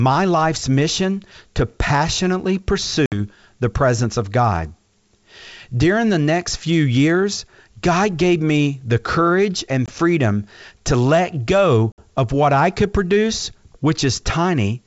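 Speech over a G.722 wideband line, with three bursts of packet loss on an ADPCM call. Holes open at 3.06 to 3.13 s after "life's mission to passionately", 9.86 to 9.91 s after "me the courage and", and 11.92 to 12.05 s after "freedom to let go". About 60, 20 and 60 ms are lost, which sounds like roughly three, one and three packets. Each gap cuts hard to silence, and the decoder's predictor and step size come back misaligned, so the audio resumes slightly distorted before settling.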